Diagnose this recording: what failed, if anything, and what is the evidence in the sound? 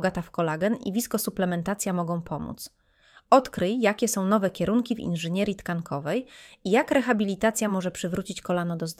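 Nothing in the recording stood out as a problem on listening, so there is no failed stage to point to.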